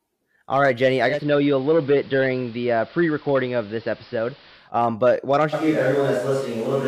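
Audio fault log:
1.05 to 4.72 s: digital radio blending to analogue. The receiver lost its digital stream and cross-faded over about 178 ms to the AM broadcast. Level drops about 2 dB, and hiss sits roughly 25 dB under the voice.
5.55 s to end: switch to a distant microphone, the likely cause. The voice suddenly turns roomy and hollow, with thinner bass, while its level stays roughly the same. Room noise rises to roughly 25 dB below the speech. The change is abrupt.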